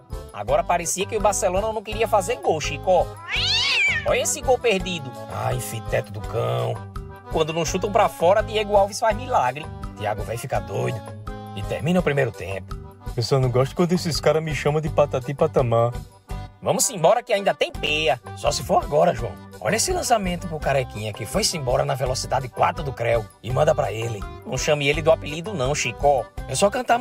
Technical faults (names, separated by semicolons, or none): processor overload crackle